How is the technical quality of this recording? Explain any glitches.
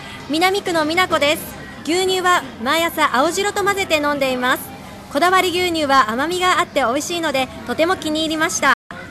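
There's one glitch, right near the end: a digital broadcast dropout from 8.73 to 8.91 s. The receiver stopped getting frames that passed their checks and muted, so the sound fades out over about 8 ms and goes silent for roughly 170 ms, which fits around seven lost frames, before coming back.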